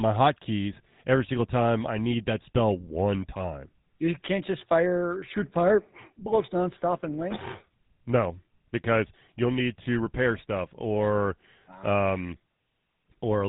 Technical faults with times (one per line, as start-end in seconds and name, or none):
0.00-13.49 GSM full-rate codec